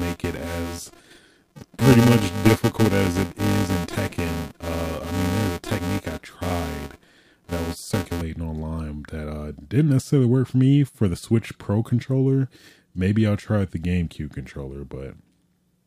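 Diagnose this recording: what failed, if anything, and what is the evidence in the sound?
A filter restarted on every block in the processing stage: from 0.0 to 8.22 s the speech carries a 345 Hz buzz, which fits a 128-sample block, tracking the level.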